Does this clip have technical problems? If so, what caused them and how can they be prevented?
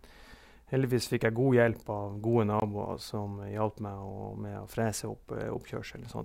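Yes. A block of digital silence cuts in from 2.60 to 2.62 s, replacing 20 ms of speech with silence and no fade. The waveform shows a near-flat line. The spectrogram shows a blank vertical strip. Such a gap points to the output buffer not being filled in time. Larger audio buffers and keeping heavy work off the real-time audio thread would prevent it.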